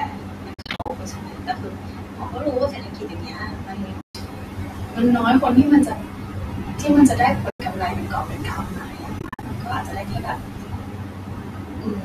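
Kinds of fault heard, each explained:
Noise suppressor artifacts: Throughout the clip, the suppressor keeps guessing which frequency bands hold steady noise and pulling them down frame by frame. So the room noise, which sits about 19 dB under the speech, dips in the gaps and swells back under the talking. What's left of it has a warbly, fluttery quality. The light coding damage is likely just the low-delay AAC coding.
Speech cut by the noise suppressor: Here the suppressor mistakes parts of the speech itself for noise and turns them down along with the background. It happens over nearly the whole clip, from the start to 6.9 s and again from 7.08 s to the end, with the deepest dips reaching about 19 dB. Softer consonants, word endings and quieter stretches sound swallowed or faint.
AAC frame loss with muting: Chunks of the coded stream go missing, and the decoder fills them with silence. 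The overlapping windows fade the sound down and back up, so you hear soft-edged holes. There are four spots. From 0.54 to 0.90 s, about 230 ms is lost in scattered bits, with runs of up to roughly 50 ms. Then 140 ms goes at 4.01 to 4.15 s and 100 ms at 7.50 to 7.60 s. Finally, 160 ms is scattered across 9.19 to 9.43 s. That pattern fits 10 ms frames.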